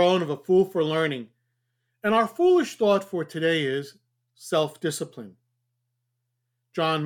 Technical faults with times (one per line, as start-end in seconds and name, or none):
none